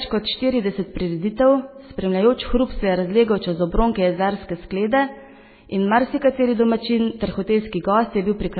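Throughout the speech, nothing is audible above about 4.5 kHz, and what remains has a heavily watery, swirling texture, with metallic chirps on the s sounds and softened consonant attacks. This is likely MP3 compression at a very low bitrate, consistent with around 16 kbps. Starved of bits, the encoder discards the treble above a fixed cut-off and zeroes weaker frequency lines, which flicker on and off between frames to produce the swirl.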